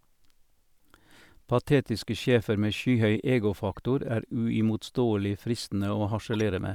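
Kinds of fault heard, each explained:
Corrupt frame decoded: a faint, brief glitch near 3.73 s and a much louder glitch at 6.33 to 6.41 s, each misplaced energy lasting a few compressed frames. Damaged bits, misread as wrong gains or codes, were played through instead of being concealed.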